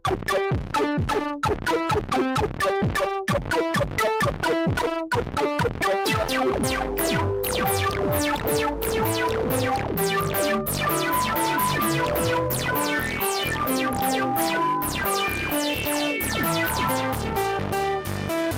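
No technical faults are audible.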